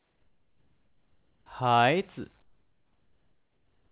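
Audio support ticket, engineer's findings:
Comfort noise in place of the background, 0.00–1.46 s and 2.42–3.92 s. Likely cause: sender-side discontinuous transmission during pauses, receiver generating synthetic fill noise. Real background, about 44 dB below the loudest passages, replaced by steady, featureless noise, about 7 dB and about 8 dB quieter respectively. Band-limited to 4 kHz throughout, which fits a G.711 A-law call path.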